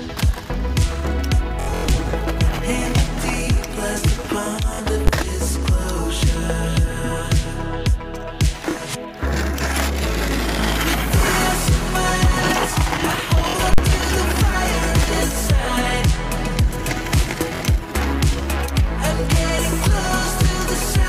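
The audio has two kinds of fault. Bluetooth stutter appears at 1.60 to 1.90 s, 4.74 s, 8.71 s, 13.49 s and 17.56 s. Packets arrived late or not at all. The receiver replayed its last short slice until fresh data came, giving a brief machine-gun buzz. The first event is the worst. About 209 ms went missing across nearly 280 ms, with one run of 93 ms. The later gaps are about 23 to 46 ms each, which fits slices of roughly 23 ms. Invalid numbers at full scale hit at 5.07 s and at 13.74 to 13.78 s. A calculation produced infinite or invalid values, and the output was pinned at one extreme value for a whole block. At 5.07 s the block is about 12 ms, which fits a 512-sample block, so it is one sharp bang. At 13.74 s the block lasts about 46 ms, which fits 2048 samples. It is a loud pop at each edge with silence between.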